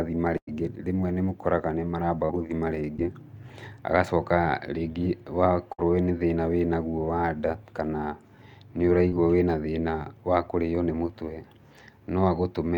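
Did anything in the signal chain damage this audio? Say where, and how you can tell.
Yes, the damage happened at the network stage. The two faults are bursts of packet loss and short concealed packet losses. There are two bursts of packet loss, at 0.37 to 0.49 s (about 100 ms missing) and at 5.72 to 5.80 s (about 60 ms). In each one the decoder keeps extending the last sound and fades it, so you hear a sustained buzz or a hiss that dies away. The audio then comes back with a chunk of the speech skipped.

The short concealed packet losses are at 2.25 to 2.31 s (40 ms lost), at 2.97 to 3.00 s (20 ms) and at 9.08 to 9.15 s (40 ms). Each one is heard as a quick smear or wobble. The receiver filled these small gaps with extrapolated pitch or shaped noise and then crossfaded back into the real signal. The repair at 9.08 s also stretches the timing slightly, adding a small sliver of time there.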